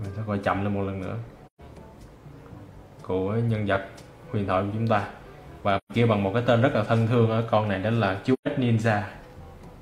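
At 1.46 to 1.61 s, 5.77 to 5.92 s and 8.33 to 8.48 s you get AAC frame loss with muting. Each gap is 128 ms, which fits about three lost frames zeroed by the decoder. The overlapping windows fade the sound down and back up, leaving soft-edged holes.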